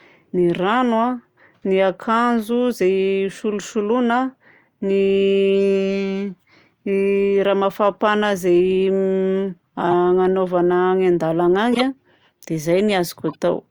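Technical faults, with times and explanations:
9.91 s, 11.73–11.83 s and 13.28–13.35 s: corrupt frame decoded. A few compressed frames arrived with flipped bits but were decoded anyway, so misread gains and codes put energy at the wrong frequencies. Each event is a brief chirp or noise burst, peaking around -10 dBFS, with the last near -20 dBFS.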